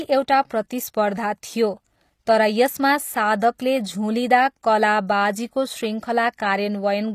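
Right from the start the speech carries that synthetic sheen you get from HE-AAC compression, and it's plainly audible the whole way through. The likely cause is a low-rate HE-AAC encode, which fits something around 24 kbps: only the lower spectrum gets properly coded, and the treble is patched in by copying lower bands upward under a rough envelope. So the top end sounds bright but not genuine, with s sounds going gritty and lispy, and nothing at all above 15 kHz.

At 3.58 s there's a brief pre-echo, a short hiss smeared over roughly 13 ms just ahead of a sharp onset. The codec spread its quantisation noise across the whole block, so noise sized for the loud attack leaked into the quiet moment before it. You hear it as a soft whoosh leading into the attack, which itself lands a bit blunted rather than crisp.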